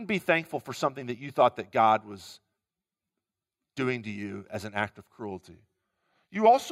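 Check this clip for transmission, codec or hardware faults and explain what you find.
One fault shows up near the end of this speech clip. A drift correction step begins at 5.31 s and lasts to the end. Playback suddenly runs about 5.9% slow, and pitch drops about 104 cents, roughly a semitone. Clock-matching software likely lowered the rate in one jump to rebalance its buffer.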